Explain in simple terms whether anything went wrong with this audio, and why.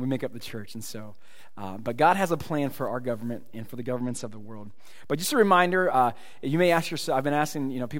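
Two things went wrong. From about 3.96 to 4.80 s, the sound suddenly loses its brightness: the crisp top end goes dull and a gritty, sandy roughness creeps in, then everything snaps back. This is a Bluetooth SBC bit pool drop. The wireless link got crowded, so the sending device squeezed the audio into far fewer bits to keep it flowing. The highest frequencies were starved first and the rest was stored more crudely, which creates that grit until the link recovered.

The second fault is a DC offset, present for the whole clip. You can't hear it directly. The entire waveform sits off its centre line, as if the recording were pushed up or down by a fixed amount. That wastes some of the room the signal has before it would clip, and on a frequency display it shows up as a constant bump at the very lowest end, below anything audible.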